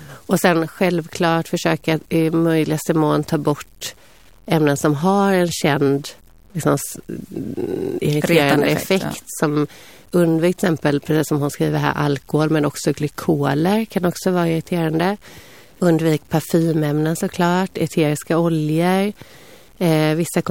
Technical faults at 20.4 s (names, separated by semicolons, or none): low bit depth without dither